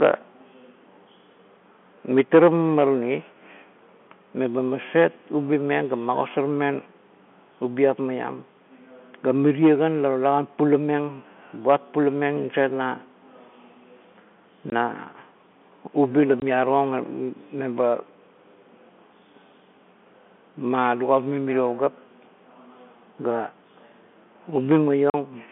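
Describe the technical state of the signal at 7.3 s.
At 7.3 s the speech is intact, carried through G.711 telephone coding on a narrow phone-line band of roughly 200 Hz to 3.4 kHz, with no fault at that moment.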